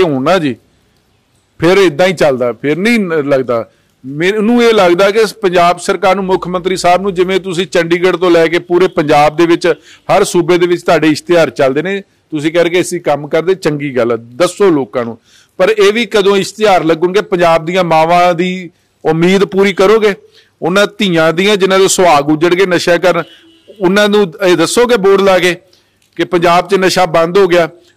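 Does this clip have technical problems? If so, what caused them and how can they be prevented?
Yes, there's hard clipping across the whole clip. The signal was pushed about 9 dB past what a stage could pass, so around a tenth of the samples get their peaks sliced flat, giving harsh fuzz on loud moments. Keep gain staging lower, leaving headroom before conversion.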